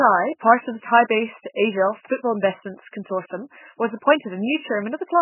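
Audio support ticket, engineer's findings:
Speech, full clip: band-limited, nothing above 3 kHz; watery, swirling texture; smeared consonant onsets. Likely MP3 compression at very low bitrate, around 8 kbps. Starved encoder truncates treble, zeroes weak spectral lines that flicker frame to frame.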